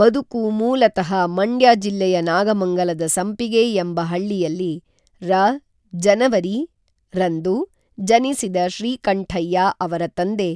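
Nothing in the speech stood out as a technical fault on listening.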